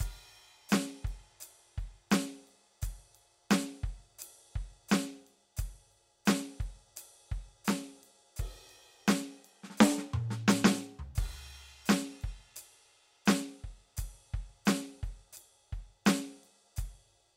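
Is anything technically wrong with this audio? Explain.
No, nothing technically wrong turns up anywhere in this music recording.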